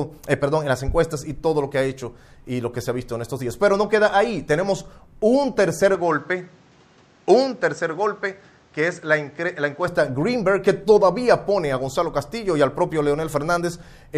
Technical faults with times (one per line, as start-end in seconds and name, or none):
5.95-9.88 input switched to a poorer device